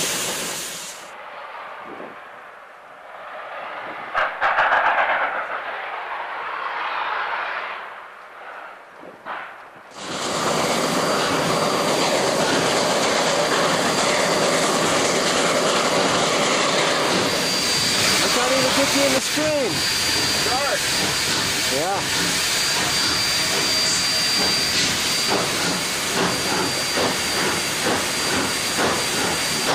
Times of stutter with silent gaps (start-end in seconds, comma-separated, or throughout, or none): none